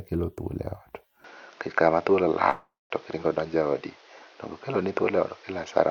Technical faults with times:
1.24-5.91 input switched to a poorer device
2.49-2.92 long network dropout

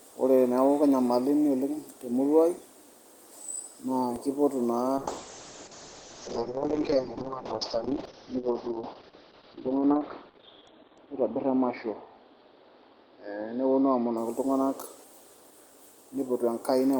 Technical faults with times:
4.16 DC step
4.99-14.23 call bitrate drop

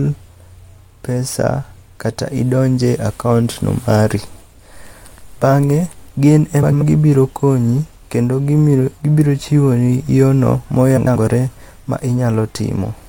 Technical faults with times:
6.62-6.82 frames out of order
10.97-11.16 frames out of order

